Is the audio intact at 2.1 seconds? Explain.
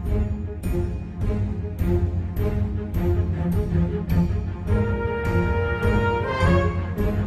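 Yes, the audio is intact at 2.1 seconds, with no dropout, click, distortion or other fault audible at that point.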